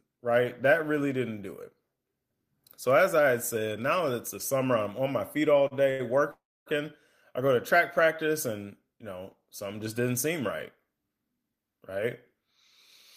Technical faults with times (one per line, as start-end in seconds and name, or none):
5.67-6.02 short stall from a late packet
6.31-6.69 call audio freeze
11.37-12.48 jitter buffer speed-up